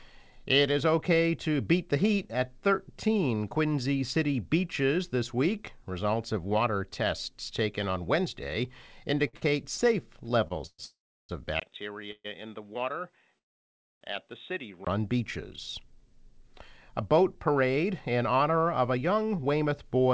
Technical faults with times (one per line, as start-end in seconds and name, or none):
9.28-10.80 repeated stalls (stutter)
10.84-11.31 call audio freeze
11.60-14.87 input switched to a poorer device
12.11-12.26 call audio freeze
13.38-14.03 call audio freeze
16.69-20.13 jitter buffer speed-up